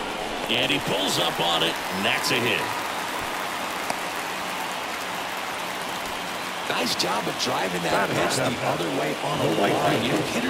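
Throughout the audio, a block size mismatch (padded) zero-fills the end of each short block, adding a buzz at 91.9 Hz and slowing playback to 0.919 times normal speed.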